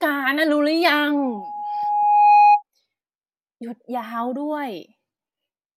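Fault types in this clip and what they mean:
Loudspeaker feedback squeal: from 1.17 to 2.63 s a single tone at 828 Hz rises out of the speech, swelling over roughly a second until it sits about 10 dB above the talker. A microphone is picking up the loudspeaker it drives, and at 828 Hz the round-trip gain exceeds one, so each pass through the loop makes that frequency louder. It keeps building on itself, leaving a narrow, piercing whistle over the speech.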